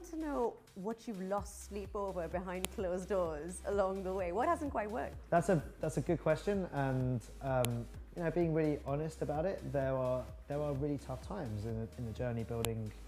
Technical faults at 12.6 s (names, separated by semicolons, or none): file header played as audio